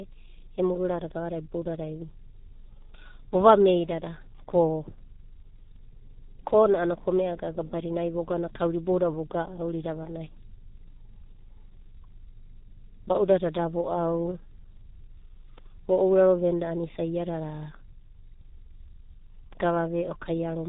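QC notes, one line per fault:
Throughout, G.723.1 codec: the speech is squeezed into a narrowband telephone channel with nothing above 3.8 kHz, and the coarse, slowly updated voice model leaves it heavily damaged, muffled and hoarse with smeared consonants, which fits a roughly 6 kbit/s stream in 30 ms frames. A simple low-pass filter would dull the top end but keep the voice clean. Here the roughness and blurred onsets come from the codec itself.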